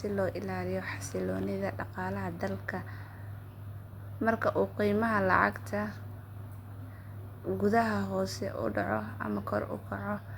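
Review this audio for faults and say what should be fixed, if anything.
No faults detected in the speech recording, so nothing needs fixing.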